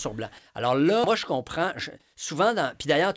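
A short speech clip carried over a call path whose spectrum stops at 8 kHz, which fits G.722 at 64 kbps, shows two faults. At 1.04 to 1.06 s there is a skip ahead: roughly 0.7 s of speech was dropped while later audio was already queued, so playback jumps straight to the later material with no fill. On a waveform this appears as an abrupt splice where the envelope changes suddenly, and on a spectrogram the harmonic and formant tracks break off and restart unrelated. From 1.34 to 3.07 s a jitter buffer speed-up follows. The receiver trimmed repeated pitch-period-sized pieces to shed built-up delay, removing around a fifth of a second in total. The speech runs at about 112% of normal speed without a pitch change and sounds hurried. On a spectrogram the harmonics stay at the same height while syllables look compressed in time.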